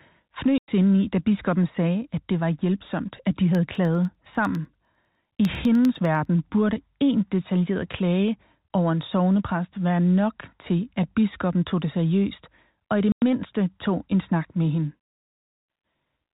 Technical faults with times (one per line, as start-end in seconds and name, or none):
0.58-0.68 packet loss filled with silence
2.02-3.08 loudspeaker feedback squeal
3.55-6.25 periodic USB or driver dropouts
13.12-13.22 packet loss filled with silence
14.42-16.06 loudspeaker feedback squeal